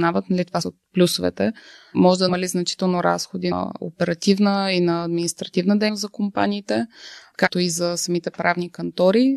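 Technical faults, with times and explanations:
2.28–2.30 s, 3.51 s, 5.88 s and 7.46–7.48 s: compressed frames skipped. Each time the audio jumps ahead, losing roughly a tenth of a second of sound, and roughly three tenths at 3.51 s. This happens because several frames, each 23.2 ms long, go unplayed, and the sound resumes from a later frame. Unlike a dropout, there is no silent gap. There is a brief disturbance at each join, while the lost sound is simply cut out of the timeline.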